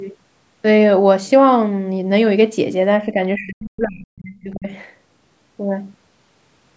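An echo canceller likely could not separate this side's talk from the far side's loudspeaker echo and pulled both down, producing speech suppressed in double talk. At 3.12 s the speech dips slightly for a brief moment. From 3.36 to 4.71 s it is pushed down far deeper, by roughly 40 dB at worst, so the voice fades before recovering. The call processing band-limits everything to 8 kHz.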